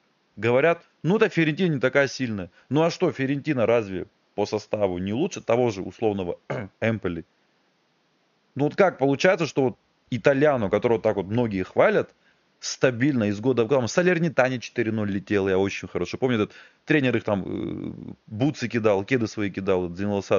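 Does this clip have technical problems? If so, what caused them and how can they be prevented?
No, the speech signal shows no technical faults, and the only other sound is the room's own background noise, sitting about 44 dB below the speech.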